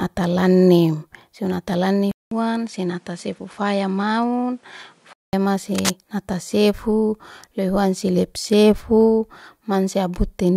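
At 2.11 s the speech cuts to a brief silence of about 200 ms, then returns duller, about 5 dB quieter, with nothing above 11.4 kHz and a faint new background hiss, until it clears at 5.33 s. This is likely an input switched to a poorer device.

From 5.75 to 5.92 s, a dense, uneven scratching burst rides over the speech, only slightly quieter than the speech itself. This is cable scratch noise, likely from a worn cable or connector whose contact resistance jumped as it moved.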